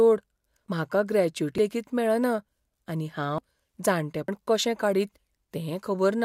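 Skips land at 0.68, 1.58 (just before "लेगीत मेळना"), 2.48 (right after it), 3.38 and 4.28 s. That's audio missing between chunks: about a tenth of a second drops out and the speech jumps straight on, likely lost at each one-second chunk handover.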